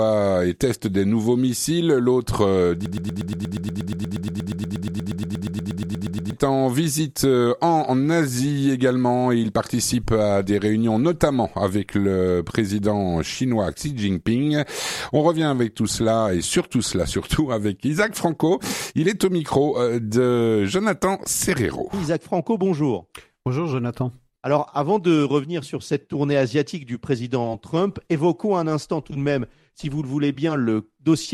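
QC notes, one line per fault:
2.86–6.33 s, broken-record loop: a 119 ms fragment repeats exactly, back to back, 29 times, giving a rapid stutter. The player, encoder or stream likely stalled and kept resending its last held piece, so the audio due here is lost.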